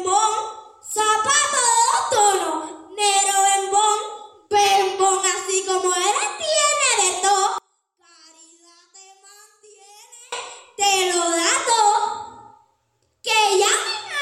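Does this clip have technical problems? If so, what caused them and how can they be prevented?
Yes. From 7.58 to 10.32 s, one channel inverted, likely a polarity flip, makes the shared content cancel when summed to mono, dropping the sound by about 29 dB. A polarity check on each channel and monitoring the mono sum before release would prevent this.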